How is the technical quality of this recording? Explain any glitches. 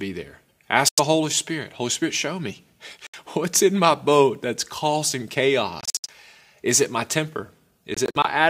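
The speech is interrupted by four short holes of silence, most likely Bluetooth dropouts. They fall at 0.88–1.00 s, at 3.07–3.16 s between "show me" and "what's in my boat", at 5.81–6.10 s after "my boat that's causing", and at 7.94–8.26 s after "it my temper". The last two are clusters of brief gaps, the longest about 70 ms. Late packets were dropped, so output cut abruptly to silence. Unlike an edit cut, the speech resumes further along, as though it had kept playing.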